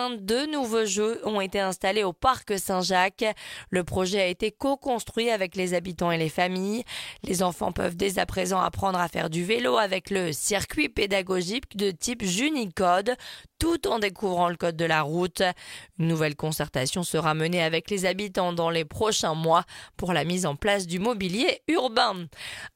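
A bit error spike occurs at 20.97 s, a single corrupted sample heard as one sharp tick. A single bit flipped somewhere in memory or on a digital link, so that one sample value leapt by a power of two, peaking at about -16 dBFS, before the next sample returned to normal. With energy spread across the whole spectrum and no relation to the surrounding audio, it sounds like a brief, dry click.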